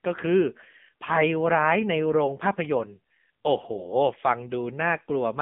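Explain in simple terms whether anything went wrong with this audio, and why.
AMR narrowband mobile codec damage runs through the whole clip, from start to finish. This is the speech squeeze used on older mobile phone calls. It keeps only a narrow slice of the sound, roughly 150 Hz to 3.5 kHz, so nothing above 3.5 kHz survives, and the voice sounds thin and muffled. Here the codec was also starved of data, so each short slice of voice is rebuilt from a rough model, leaving it heavily buzzy and synthetic.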